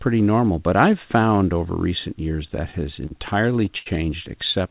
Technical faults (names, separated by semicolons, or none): repeated stalls (stutter); short stall from a late packet